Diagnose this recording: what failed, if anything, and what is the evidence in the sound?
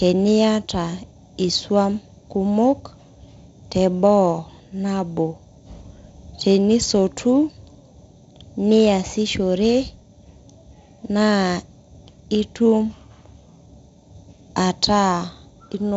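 Nothing in the recording points to a failure at any stage. The speech carries the sound of G.722 wideband telephone coding, with content reaching up to about 7.7 kHz and nothing above it, and a light grain from the codec that fits its 48 kbit/s mode.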